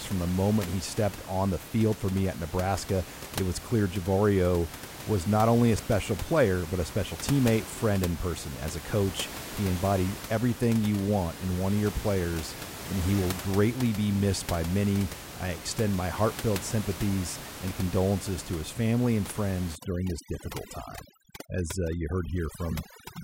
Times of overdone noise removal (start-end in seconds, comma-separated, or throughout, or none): 19.75-23.23